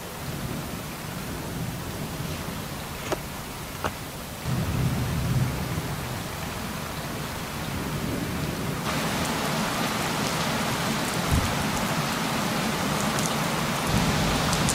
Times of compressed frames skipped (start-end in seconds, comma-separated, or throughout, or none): none